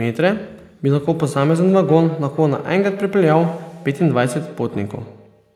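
From 1.12 s to the end, the speech carries a feedback echo between two devices: each word returns roughly every tenth of a second, thinner and ringing, peaking about 16 dB below the voice. A second device replays this audio into the microphone, and unlike a single room reflection the repeats recur at that fixed interval.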